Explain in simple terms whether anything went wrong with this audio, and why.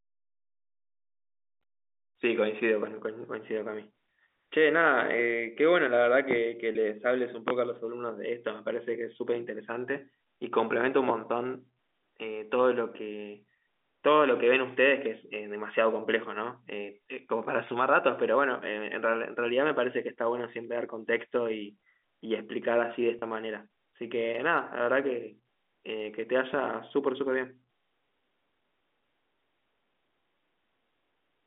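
A couple of things went wrong with this speech.

First, there are several loud pops: a quick double pop from 6.31 to 6.40 s, then single ones at 7.48, 11.09 and 26.53 s. Each is a sharp click or thump that jumps well above the talking, which carries on underneath. That kind of sudden spike most likely comes from an electrical glitch in the chain, such as a bumped connector, a switch, static or a hiccup in the audio driver.

Second, there are two short spots of packet loss with pitch repetition, at 6.72 and 23.19 s. Each time about 30 ms of sound went missing, which fits a single dropped network packet. Rather than leaving a hole, the receiving end filled the gap by repeating the last little cycle of the voice. Because the gap is so short, you hear a brief held, slightly buzzy smear instead of silence, and then the speech picks back up.

The audio has the narrow, boxy sound of a normal phone line, and that is just the telephone coding doing its usual job.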